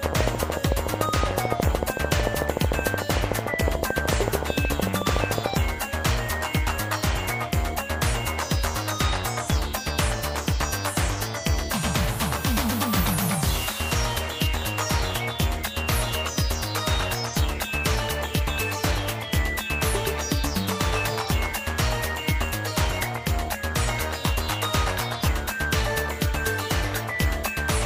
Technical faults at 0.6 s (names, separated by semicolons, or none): train of clicks